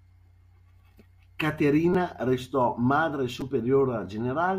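At 1.93 s and again at 3.41 s, a repeated buffer occurs. New audio arrived late, so the device replayed its last short block, which sounds like a buffer of about 5 ms. The repeats cost roughly 15 and 10 ms of speech, heard as a brief buzzy click.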